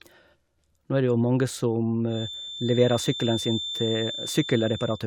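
From 2.05 s to the end of the speech, a feedback whistle sits behind the talker: a thin, steady tone at 3.6 kHz, somewhat quieter than the speech and slowly swelling and fading in level. The likely cause is a loudspeaker-to-microphone loop held just at the edge of feedback, sustaining one frequency without growing. On a spectrogram it shows as a single bright horizontal line at 3.6 kHz starting at 2.05 s. The waveform shows little change.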